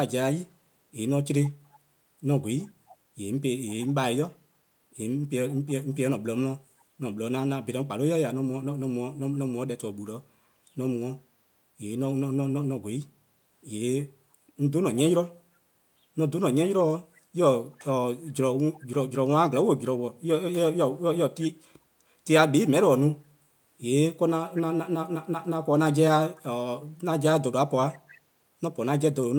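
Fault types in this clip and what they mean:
Echo leak: A faint copy of the speech returns 340 ms late, well below the main level. It comes in six bursts between 1.73 and 28.18 s, longest from 1.73 to 4.3 s. Likely cause: a loudspeaker's echo canceller letting some sound back.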